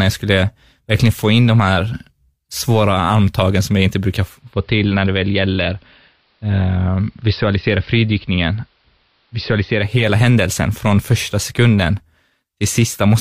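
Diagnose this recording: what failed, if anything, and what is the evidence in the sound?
Receiver: digital radio blending to analogue AM, 4.19–10.14 s; 367 ms cross-fades drop level about 3 dB, add hiss.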